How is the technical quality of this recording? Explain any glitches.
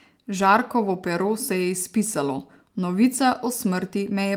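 Nothing here stands out as a glitch; the recording sounds steady and unbroken the whole way, with no dropouts, clicks or sudden jumps to point to.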